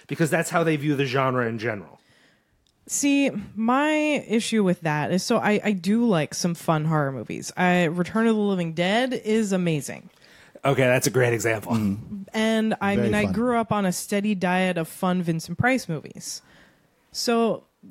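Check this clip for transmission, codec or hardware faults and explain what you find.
Nothing in the speech recording points to any transmission, codec or hardware fault at any point.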